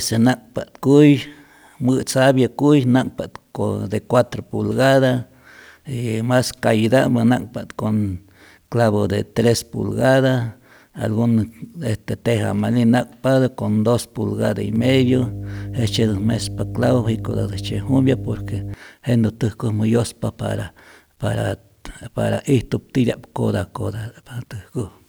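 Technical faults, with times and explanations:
14.76–18.74 s, mains hum: right after "dos pulgada y", a steady low tone at 50 Hz rises under the speech, sitting roughly 10 dB below it, and holds for about 4 s until just before "jenä täjkojmä". The 50 Hz pitch is the frequency of the power line itself. A ground loop or a nearby transformer has coupled that supply into the signal path, so the mains frequency is heard as a constant drone alongside the speech.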